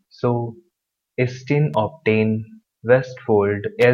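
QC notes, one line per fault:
1.74 s, electrical switching spike: a sharp snap lands on top of the speech, around -20 dBFS, likely picked up from a nearby switch or motor arcing. The waveform shows a brief isolated spike; the spectrogram shows a thin vertical broadband line.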